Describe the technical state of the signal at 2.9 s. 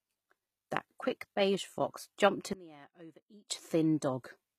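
At 2.9 s the signal sits inside a sudden gain jump running from 2.53 s to 3.5 s, just after "quick beige fox jumped". The digital gain was likely switched in a single sample with no ramp, cutting the level by about 23 dB. Speech and background noise drop together at 2.53 s, then snap back up at 3.5 s. Both edges are abrupt, with no fade, so the loudness changes as a hard step.

The same moment also carries HE-AAC compression damage, as the whole clip does. The codec likely kept only the lower spectrum and rebuilt the treble by spectral band replication, copying lower bands upward under a coarse envelope, at a rate that fits roughly 20 kbps. The upper harmonics no longer line up with the real ones, so s sounds come out gritty and lispy and the top end has a metallic sheen that is plainly audible.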